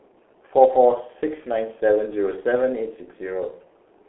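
Speech throughout carries heavy G.723.1 codec damage: a 300 Hz to 3.4 kHz band with nothing above 3.8 kHz, a muffled, hoarse tone and smeared consonants, consistent with roughly 6 kbit/s coding.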